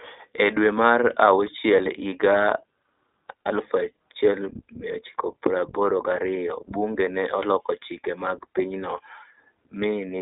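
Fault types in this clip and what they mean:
iLBC codec: narrowband VoIP coding that rebuilds each 20 ms frame independently, leaving the speech in a 300 Hz to 3.6 kHz band, nothing above 3.7 kHz, and a plainly rough, synthetic grain. A simple band limit would sound muffled but not grainy.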